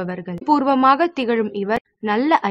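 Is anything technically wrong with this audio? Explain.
Yes. Two short glitches break into the sound, from 0.35 to 0.42 s and from 1.74 to 1.85 s. Both come from damaged data in the compressed stream: corrupted bytes make the decoder misread those frames and lose sync until it finds the next frame header.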